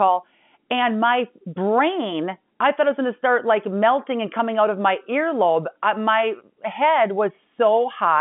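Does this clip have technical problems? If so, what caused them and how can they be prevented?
No, nothing here points to a technical problem.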